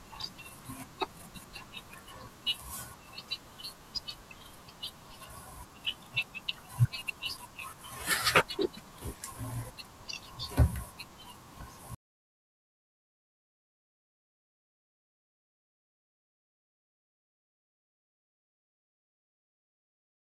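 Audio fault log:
No fault can be heard in this speech clip.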